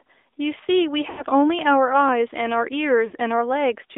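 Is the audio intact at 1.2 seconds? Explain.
No. At 1.2 seconds the audio sits inside a burst of lost AMR speech frames running from 1.10 to 1.25 s, about 80 ms of missing data, which fits four 20 ms frames. The decoder fills the gap by repeating the last good pitch and vocal tract settings at falling gain, so the sound stretches into a brief smeared warble that fades toward silence before recovering roughly. On a waveform the envelope decays over that span; a spectrogram shows frozen, repeated harmonics thinning out.

The AMR narrowband mobile codec is also present at that moment, as it is throughout. The line band runs from 300 Hz to 3.6 kHz, and the plainly audible buzzy, synthetic texture points to a mid-rate mode around 10 kbps, where a pulse-excited vocal tract model rebuilds the sound from sparse data. A spectrogram shows a hard ceiling near 3.6 kHz with nothing above it, weak energy below 300 Hz, and grainy, slightly smeared harmonic detail.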